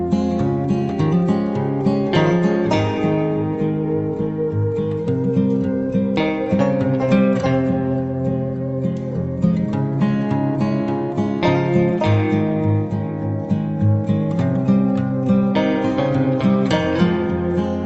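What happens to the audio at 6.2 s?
Nothing goes wrong at 6.2 s: the audio runs on intact through that moment, carried by the WebRTC call path with its ordinary Opus coding and a top end that stops at around 8 kHz.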